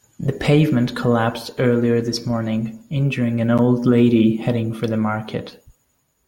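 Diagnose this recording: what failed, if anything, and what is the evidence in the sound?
Nothing failed in this recording, and there is no evidence of a fault in the sound.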